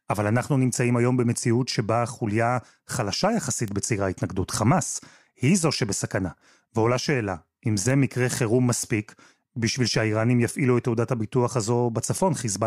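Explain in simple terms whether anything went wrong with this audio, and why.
Three short clicks cut through the speech, at 3.68 s, 4.50 s and 7.90 s. Each is a bit error spike: a single stored number in the digital audio had one bit flipped, so that one sample jumped to a wrong value and the next sample was correct again. Because the jump lasts only one sample, it sounds like a sharp tick with no pitch, unrelated to the speech. The one at 4.50 s is quieter than the other two.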